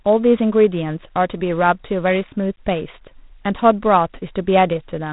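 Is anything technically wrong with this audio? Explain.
Yes. Throughout the whole clip the speech has been through G.726 ADPCM coding, and it shows. Instead of sending each sample, the codec sends a few bits describing how far the signal strays from an adaptive prediction. At 24 kbit/s that's only about 3 bits a sample, so the coding error is plainly audible as a harsh, rasping hiss that rises and falls with the speech level. The band also stops at roughly 3.8 kHz, which is why it sounds thin and telephone-like.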